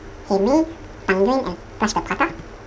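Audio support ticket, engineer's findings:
Whole clip, speech: plays at 2x speed, pitch up 12 semitones (one octave). Fault: audio read two samples at a time (double speed). Likely reader frame-size mismatch, assuming two channels or double-width samples. Pairs consumed per frame.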